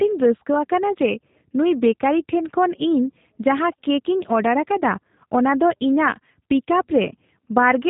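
Speech with G.729 codec damage throughout: band-limited to about 3.8 kHz, rough and synthetic from pulse-based frame reconstruction, consistent with G.729A at 8 kbit/s.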